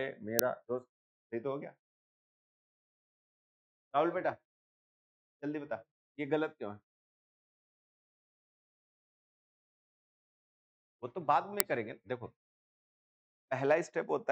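At 0.39 s and again at 11.60 s, a tiny, loud crack cuts in. This is an uninitialised buffer. A block was played before audio was written, so leftover memory became samples. Each burst lasts about 0.73 ms, which fits a 32-sample block.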